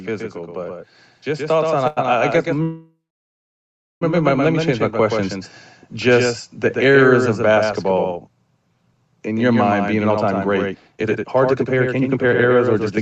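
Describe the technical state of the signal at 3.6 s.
At 3.6 s the signal sits inside a call audio freeze running from 2.63 to 4.03 s. The receiver ran out of packets, likely because they were held up and the jitter buffer emptied. It bridged the wait with a fading fill and then about 1.04 s of silence, which covers this moment. When the audio resumes it carries on from where it stopped, so a 1.39 s gap has been inserted and nothing is lost. A dropout, by contrast, would skip content.

The same moment falls within automatic gain rising, from 1.24 to 5.52 s. The gain control judged the input too quiet and raised it by about 8 dB over several seconds. Voice and background swell together, which separates it from a speaker simply getting louder.

A doubled audio track runs throughout, likely from a second, slower capture path or an edit holding two copies out of step. A full-band copy follows around 150 ms behind, about 5 dB quieter. 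Unlike room echo, it has no decay or reverberant colour.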